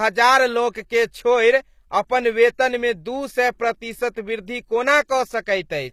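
Throughout, the speech has gritty, lispy s sounds and synthetic-sounding treble ending at 15.4 kHz, likely HE-AAC compression rebuilding the highs from copied lower bands at a low bitrate.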